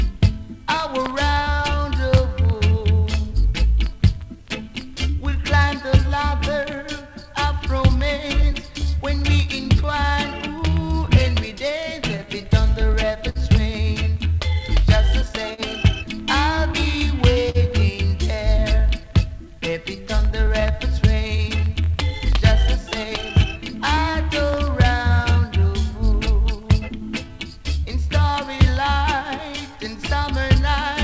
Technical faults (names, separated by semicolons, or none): clock drift between sender and receiver; repeated timing corrections; scattered short gaps